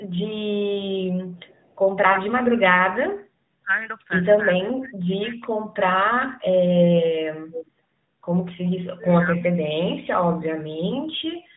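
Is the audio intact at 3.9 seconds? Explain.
No, lost AMR speech frames at 3.84 to 3.89 s, consistent with a single 20 ms frame. The decoder reused the previous pitch and vocal tract settings at lowered gain, leaving a brief dip or warble.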